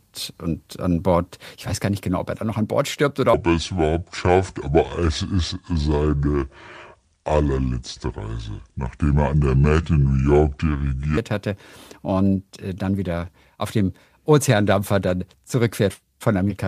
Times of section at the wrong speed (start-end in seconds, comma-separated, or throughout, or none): 3.34-11.17